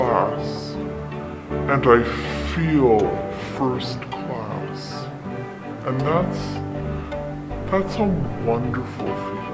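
Throughout, the audio has a wrong sample rate: it is played back at about two thirds of its recorded rate without conversion, which fits 24 kHz material run at 16 kHz. Everything runs at 0.667 times normal speed and sits about seven semitones lower, sounding slow and dragged down.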